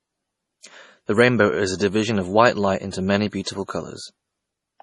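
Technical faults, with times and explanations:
Throughout, MP3 compression: nothing gets through above 11.2 kHz, and the speech has a heavy watery, swirly quality with metallic chirps on s sounds. That's likely an encoder starved of bits, fitting about 32 kbps, cutting treble and dropping weak detail frame by frame.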